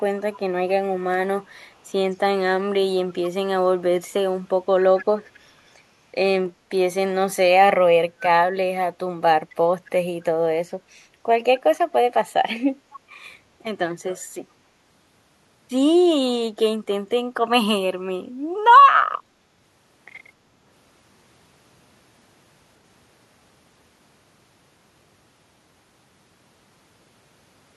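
Faint copies of the speech trail 264 ms behind it at 0.19–0.4, 1.44–1.79, 3.22–3.3, 4.8–5.05, 5.34–5.4, 9.5–9.54 and 12.93–12.97 s, well below the direct speech. This echo leak is likely from a far-end loudspeaker whose echo canceller let some microphone pickup return.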